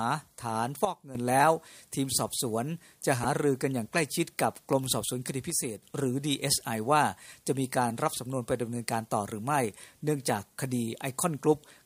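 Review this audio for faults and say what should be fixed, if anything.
At 0.85–1.15 s and 5.50–5.82 s, the level drops abruptly by about 12 dB and about 6 dB. This is a sudden gain jump, likely an unramped gain change. Sound and background noise fall together instantly, unlike a compressor's gradual gain riding.

At 3.22–3.25 s, there is damaged data in a compressed stream: the decoder lost frame sync and resynced.

Ramp every gain change over several milliseconds, and carry the compressed stream with checksums and error correction so corrupted frames are caught before decoding.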